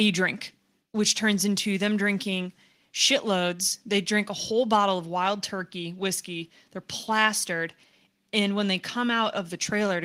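Nothing stood out as a technical fault anywhere in this speech recording on listening.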